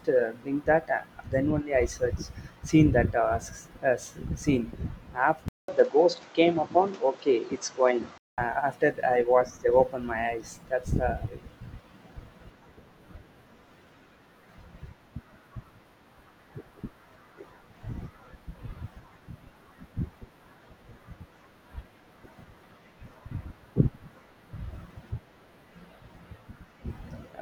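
Input switched to a poorer device, likely, from 5.48 to 8.38 s: after a 200 ms gap the speech turns dull, with nothing above 8 kHz, a level shift of about 5 dB and a new noise floor roughly 35 dB down, before the fuller sound returns.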